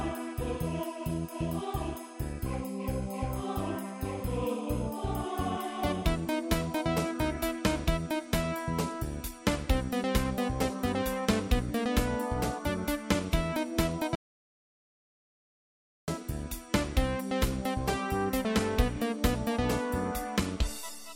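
At 14.15 s the audio cuts out abruptly into dead digital silence, with no room tone at all, and resumes mid-flow at 16.08 s, so about 1.93 s of material is simply gone. This audio dropout to silence likely comes from a lost input while the recorder kept writing silence.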